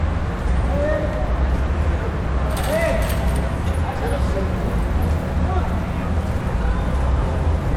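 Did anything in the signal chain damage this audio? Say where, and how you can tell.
Yes. A short, loud chirp-like blip cuts through the sound from 5.61 to 5.66 s, lasting about 50 ms. That is a corrupt frame decoded at the codec stage: one compressed frame arrived with flipped bits, and the decoder played it anyway, scattering energy into the wrong frequencies for that frame's duration.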